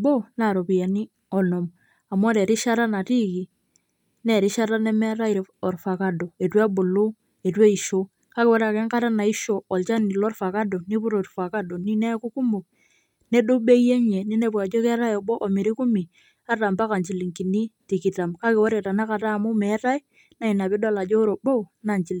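No technical faults can be heard anywhere here.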